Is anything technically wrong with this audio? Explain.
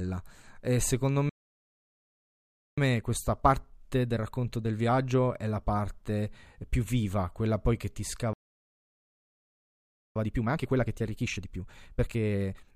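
Yes. The speech is interrupted twice by a playback stall, and each stall is followed by time-compressed catch-up.

The first stall runs from 1.29 to 2.78 s, about 1.5 s of silence. The second runs from 8.33 to 10.16 s, about 1.8 s. Both are likely caused by the player running out of buffered data or having its audio thread blocked, so the output goes dead until it recovers. On a waveform each appears as a flat line cutting into ongoing speech, and on a spectrogram as a blank vertical band with abrupt edges.

The catch-up follows each gap. From 2.78 to 5.78 s the speech plays about 1.15 times faster. From 10.16 s to the end it plays about 1.5 times faster. The player drains its backlog by removing short slices and cross-fading the remainder, so pitch stays put while the delivery sounds rushed. The second catch-up is the more hurried of the two. On a spectrogram, harmonics stay at the same heights but syllables are packed closer together.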